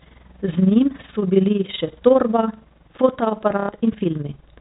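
From the start, the speech carries overlap-add ripple. The audio was split into windowed frames and rebuilt with an overlap that does not add up to a steady gain. So the level dips and swells once per frame, around 20 times a second, by about 11 dB. It sounds like a fast, rough flutter, a robotic tremolo laid over every syllable. It runs through the whole clip.

From 3.6 to 3.69 s comes packet loss with the last packet repeated. About 90 ms of audio never arrived. The receiver filled the gap by replaying the last good packet. That length fits three lost packets of 30 ms each. The replays seldom line up with the pitch. The short run buzzes at roughly 33 Hz and sounds like a brief mechanical stutter. The band limit of the telephone coding stays audible under both faults.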